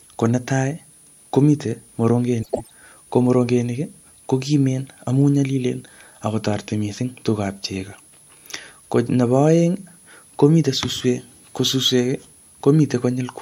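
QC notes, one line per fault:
throughout: switching supply whistle. A thin high tone wanders between about 9.6 and 10.6 kHz, roughly 30 dB under the speech. A switching power supply running in audible burst mode or beating with another one leaks in. On a spectrogram it is a wavering horizontal line near 10 kHz.
2.43–2.71 s: frames out of order. Two adjacent blocks of about 105 ms play swapped, which fits runs of four codec frames each, so the speech garbles into a flutter. The waveform shows abrupt envelope steps, and the spectrogram shows misaligned formants.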